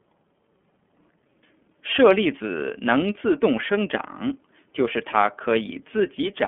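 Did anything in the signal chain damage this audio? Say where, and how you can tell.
Yes, at the codec stage: the speech has been through the iLBC codec for its whole length. Nothing survives above about 3.4 kHz or below about 200 Hz, giving the narrow telephone-line band, and the voice carries a plainly audible rough, synthetic edge. iLBC codes each frame's excitation independently of the previous one, and the texture here fits 30 ms frames at around 13.3 kbps.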